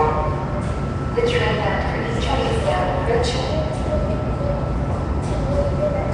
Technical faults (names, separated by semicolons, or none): Nellymoser compression